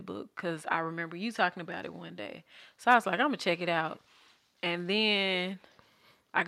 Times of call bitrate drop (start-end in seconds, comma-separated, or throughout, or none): none